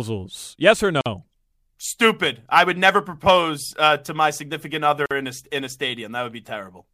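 At 1.01 to 1.06 s, and again at 5.06 to 5.11 s between "uh to my significant" and "in a in a", the speech is cut by a 49 ms gap at a join of encoded pieces. Separately encoded segments were butted together with their encoder delay and end padding left in, so a short silence opens with smeared edges. Unlike a dropout, nothing is lost, since the speech resumes exactly where it stopped, and the gaps fall at a regular 4 s spacing.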